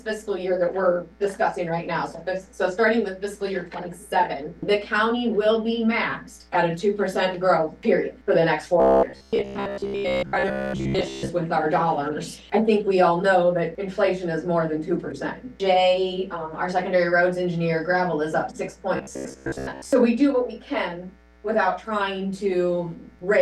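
From 8.80 to 11.31 s, and again from 18.97 to 19.93 s, the sound turns hard and metallic. A fixed buzz near 67 Hz runs through it. This is robotic sound from repeated short buffers, likely caused by 15 ms chunks looping while most new audio is skipped.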